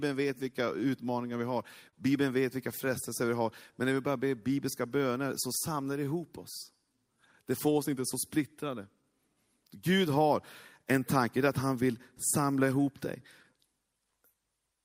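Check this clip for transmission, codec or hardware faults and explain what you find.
The speech carries a sender-side timing fault, with a steady stretching hiccup and one brief held sound.

Throughout the clip, the pacing feels faintly dragged and unsteady rather than smooth. This is clock drift between sender and receiver: the sending device's audio clock runs roughly 3% slower than the receiver's, so fewer samples arrive than the receiver plays out. The jitter buffer keeps running low, and the receiver must keep compensating to avoid going empty.

From 0.08 s to 14.77 s, small stretch-like hiccups recur at uneven spacing, and the delivery plays at about 98% speed. These are repeated timing corrections, all in the same direction: the receiver repeats short slices of audio to pad out the slow incoming stream. Together they add roughly 0.4 s over the clip. Each edit is tiny, so it registers as a slightly wobbly tempo, not as a distinct glitch.

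At 1.89 s to 1.95 s, a sound is held a little too long, with a faint buzzy, static quality. This is a short stall from a late packet: the jitter buffer ran dry, and the receiver extended the last sound for 33 ms until the late data arrived. Playback then resumed from the same point, so nothing is lost, but from there the audio runs 33 ms later.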